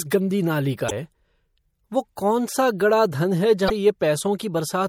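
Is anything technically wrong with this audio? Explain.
Yes, there are two problems. Throughout the clip the speech sounds plainly watery and swirly, and faint detail flickers in and out. The likely cause is MP3 compression at a low bitrate, around 64 kbps. With so few bits, the encoder zeroes quieter frequency components. Those components switch on and off from frame to frame, which produces the swirl.

There is also damaged data in a compressed stream, heard as two brief squawks or blips at 0.88 to 0.92 s and at 3.66 to 3.70 s. Each lasts about 40 ms. At those points the decoder hit corrupted bytes, misread or rejected the frames, and lost sync. It then searched for the next valid frame header, and during that gap the output briefly broke up.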